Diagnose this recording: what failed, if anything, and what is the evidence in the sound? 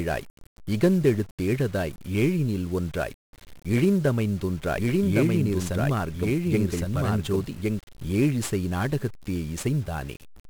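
The codec stage failed: the whole recording carries 1-bit DFPWM compression, and the damage is heavy. From start to finish the speech is wrapped in dense broadband quantisation noise, fuzzy and crackly, with the top end sunk under hiss. DFPWM spends a single bit per sample to nudge an adaptive level up or down, so fine detail is lost and the error spreads across the spectrum. The noise density fits a rate near 48 kbps.

From 4.61 s to 7.79 s the signal shows a doubled audio track. A second full-band copy of the speech runs about a second behind the original at roughly 5 dB lower. It has no decay tail or room colouring, and it switches in and out abruptly at those boundaries, which rules out an acoustic echo. The likely cause is a second, slower capture or playback path, or an edit that left two misaligned copies overlapping.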